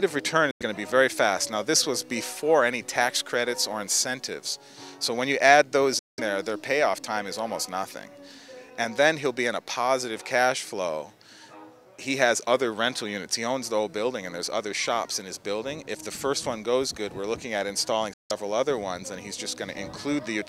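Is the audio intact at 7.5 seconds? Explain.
Yes, at 7.5 seconds the audio runs through cleanly, with no dropout, click, distortion or other break in the sound.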